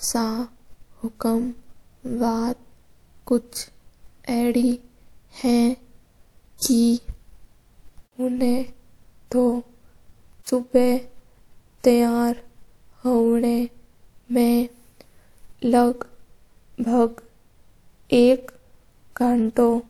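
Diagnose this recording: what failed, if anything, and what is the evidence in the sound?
The codec stage shows pre-echo at 6.58 s and again at 10.43 s: a brief hiss about 37 ms long runs ahead of a sharp attack. The transform codec spread quantisation noise sized for the loud onset across its whole block, including the quiet stretch before it.

The storage and playback stage produced CD scratch ticks: six ticks between 12.40 and 13.09 s, the longest around 3 ms. A scratch destroyed more data than error correction could rebuild on each disc revolution, and the player interpolated or muted those samples.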